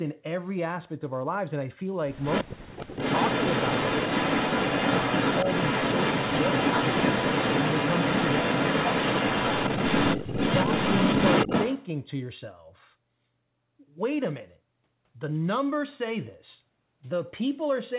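At 2.23 s a second copy of the speech arrives about 225 ms behind the original, roughly as loud, until 2.44 s. This echo leak likely comes from a far-end loudspeaker whose echo canceller let its microphone pickup pass back.

From 2.44 s to 2.97 s the speech itself sinks very deeply, nearly vanishing for about half a second. This is speech suppressed in double talk, likely the canceller muting everything while both ends talked at once.

From 2.82 s to 11.87 s the echo returns for a long stretch, now about 255 ms late and a little louder than the direct speech. It is the same echo leak, heard over the 4 kHz-limited G.711 call band.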